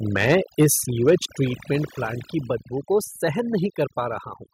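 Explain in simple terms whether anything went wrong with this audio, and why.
Several things went wrong. A noise reduction tool ran far too strongly for the whole recording, which counts as overdone noise removal. It cut away anything it judged to be background hiss, and it took the softer parts of the speech with it. The background sinks to near silence dotted with faint twinkling specks.

The microphone's input was likely set too high, so the loudest moments hit the ceiling of what the equipment could record and had their tops sliced off. That is microphone overload. From 0.2 to 0.66 seconds only a small part of the sound is flattened, giving a crackly edge. From 1.08 to 1.15 seconds much more is cut, and that stretch sounds harsh and crunchy.

The calling software likely noticed the microphone running too hot and turned its volume down in single quick steps. That is the microphone volume being stepped down. 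Both the voice and the background suddenly get a little quieter at 0.63 seconds, right as the first overloaded stretch ends. A bigger drop follows at 1.62 seconds, soon after the second one, and another small drop comes at 3.66 seconds.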